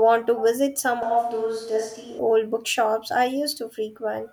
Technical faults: switch to a distant microphone

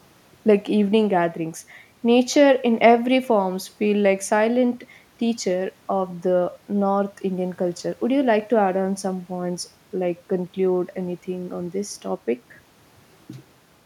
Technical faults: none

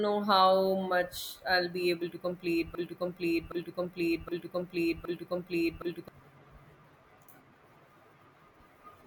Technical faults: broken-record loop

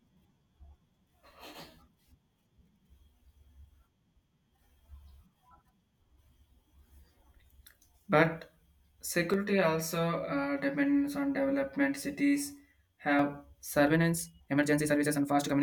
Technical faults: channel delay (comb filtering); time-stretched section

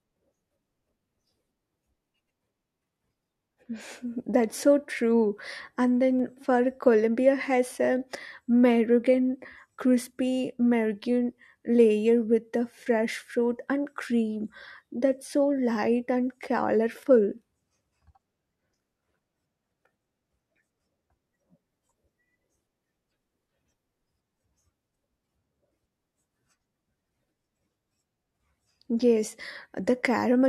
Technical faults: dropped samples

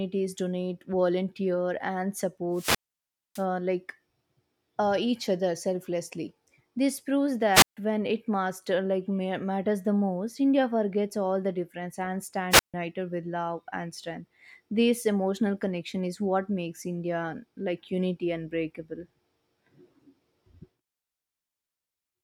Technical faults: wireless microphone squelch dropout

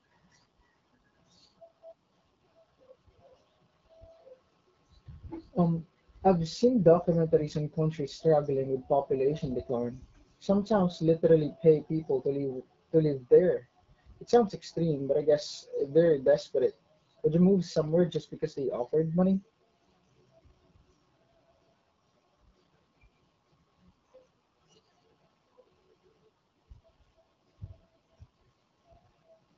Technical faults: AMR wideband (HD Voice) codec

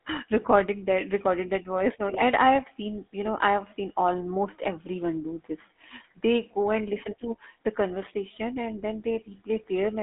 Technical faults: GSM full-rate codec

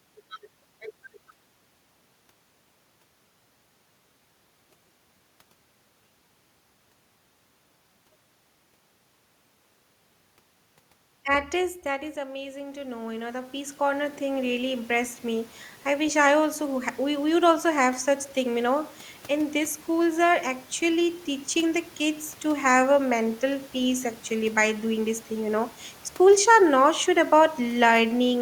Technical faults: automatic gain rising

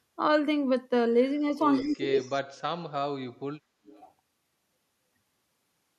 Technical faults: speech suppressed in double talk; echo leak; background gated by the echo canceller

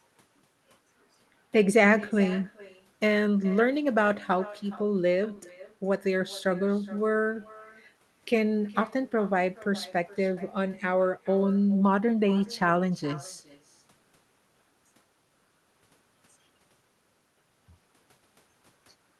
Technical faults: echo with no canceller

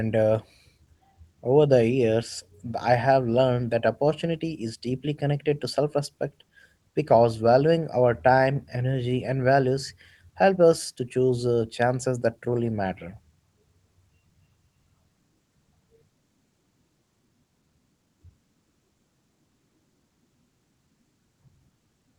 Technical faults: none

